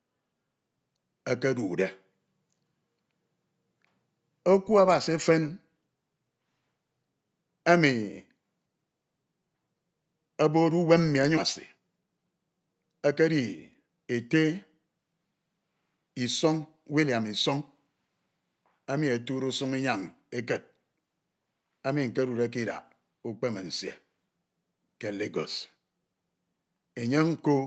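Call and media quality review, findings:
Abrupt jump forward at 11.37–11.39 s with no audible gap. About a second of sound is missing and the two sides are butted together. Skip ahead: a delayed stretch was dropped in transit or discarded by the jitter buffer, and playback resumed at queued later audio.

Hurried delivery at unchanged pitch, 11.59–13.40 s at 120% speed and again 13.83–14.44 s at 113%. Jitter buffer speed-up: after the backlog, the receiver trimmed pitch-period-sized slices repeatedly, removing about 400 ms and then about 100 ms, to pull latency back down. Content above 8 kHz is absent throughout, consistent with the call codec's bandwidth.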